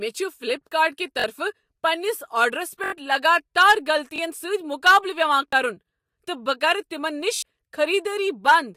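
Repeated buffer at 1.20 s (between "فلیپکارٹ کہ" and "پننس آرڈرس"), 2.84 s (after "پننس آرڈرس"), 4.16 s, 5.48 s and 7.36 s. Each time, new audio arrived late and the same 21 ms piece replayed one to four extra times, which fits a 1024-sample buffer. It is heard as a brief stutter with hard joins, longest at 2.84 s.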